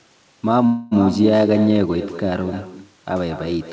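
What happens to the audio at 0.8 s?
From 0.66 to 0.93 s the sound stalls in a call audio freeze. The last sound is stretched into a fading buzz for about a quarter second, with no silence. Then it resumes where it stopped, so nothing is lost but everything after runs later. Delayed packets likely drained the jitter buffer. Across this moment there is also echo with no canceller. A thinner copy trails the sound by around a fifth of a second, about 10 dB quieter, picked up from a loudspeaker and sent back.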